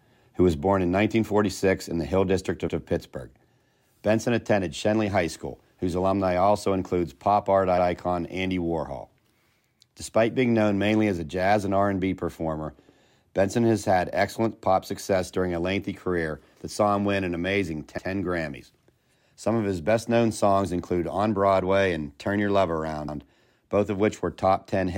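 Speech with overlapping chunks: 100 ms repeats at 2.68, 7.78, 12.88, 17.98 and 23.08 s as 5-second chunks start early, showing duplicated waveform and spectrogram slices at each join.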